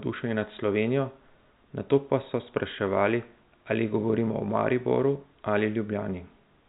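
No technical faults occur at any point in this speech, which sits within the ordinary narrow band of G.711 telephone coding.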